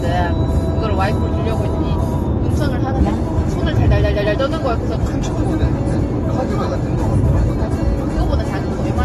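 From start to finish the audio has a hard ceiling, with nothing above 12 kHz, and it sounds dull and smeared, with a fizzy, warbly texture on anything sustained or hissy. That's likely AAC compression, AAC-LC specifically, running at a low rate that fits something like 32 kbps. Starved of bits, the encoder drops the top band entirely and quantises what's left so coarsely that holes and swirly artefacts open up across the spectrum.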